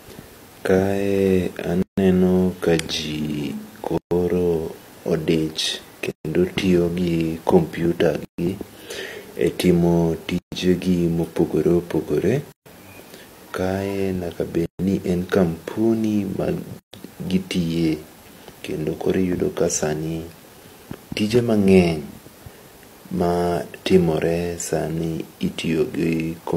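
Speech with a gap at a join of encoded pieces every 2 s: silences at 1.82, 3.98, 6.11, 8.25, 10.38, 12.52, 14.66 and 16.79 s, the first 151 ms, the rest 136 ms, from untrimmed encoder delay and end padding. Each appears as a blank column with smeared edges.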